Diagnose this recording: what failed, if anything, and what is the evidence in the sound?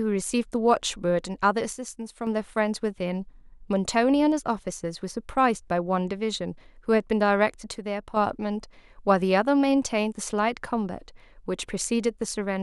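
The speech drops abruptly by about 6 dB from 1.73 to 2.27 s and again from 7.74 to 8.17 s, then returns just as suddenly to full level. This is the signature of one channel dropping out: the likely cause is an intermittent contact in one leg of the analogue wiring. Once summed to mono, the surviving channel carries half the shared signal. Unlike a full dropout, the sound never goes silent, and the step is too abrupt and square-edged to be a fade or gain ride.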